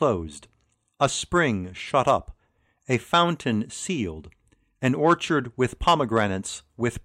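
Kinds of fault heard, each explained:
No technical faults can be heard in this recording.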